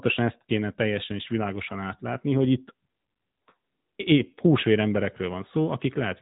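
Throughout, the speech runs through the AMR narrowband mobile codec, rebuilt frame by frame from a vocal-tract model and a few pulses. Nothing passes above 3.8 kHz, so it sounds boxed-in, with a plainly buzzy, synthetic edge that fits a mid-rate mode near 10.2 kbps.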